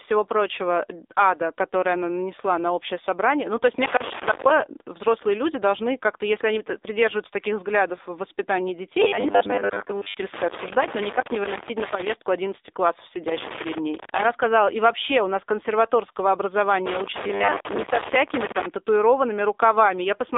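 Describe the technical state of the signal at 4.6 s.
Irregular crackle and scratching chops the sound from 3.81 s to 4.62 s, between "собрание ну то есть" and "взрослые люди должны", so 4.6 s falls at its tail end. This is loose connector crackle: a worn or dirty contact making and breaking rapidly, interrupting the signal, with any DC on the line adding pops.

Underneath, the speech has a buzzy, synthetic quality with nothing above 3.7 kHz and little below 300 Hz. This is plainly audible AMR narrowband mobile codec damage, which fits a low rate of around 7.4 kbps. The codec rebuilds speech from a vocal-tract model excited by a few pulses per frame, and that thin pulse excitation is what makes it buzzy.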